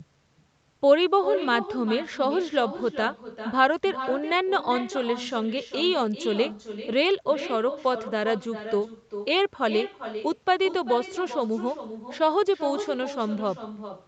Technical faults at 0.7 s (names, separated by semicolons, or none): echo with no canceller